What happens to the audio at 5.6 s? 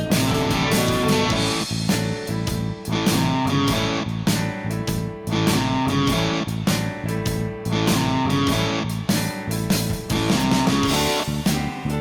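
Nothing goes wrong at 5.6 s; the audio plays through that moment intact, with no dropout, click, distortion or other audible fault.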